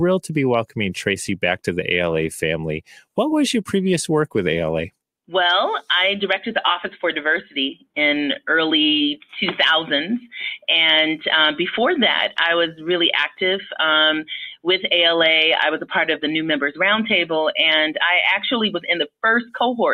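The noise suppressor misjudged part of the signal as noise between 7.74 and 7.89 s and pulled it down by up to about 21 dB. This sound cut by the noise suppressor comes across as a brief dip in level, roughly 150 ms long.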